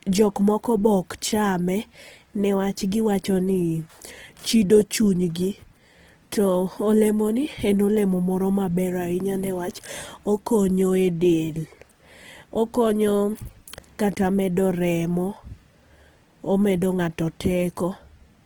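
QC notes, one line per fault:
throughout: Opus compression, the likely cause. The speech sounds rough and grainy, with a noisy fizz on sustained sounds. There is little swirl, because few holes open in the spectrum. The codec keeps each band's energy, but bands that run short of bits are filled with folded or noise content. The damage is plainly audible and fits a low bitrate near 16 kbps. Bandwidth stays full up to 20.2 kHz, which points to the music-style CELT mode.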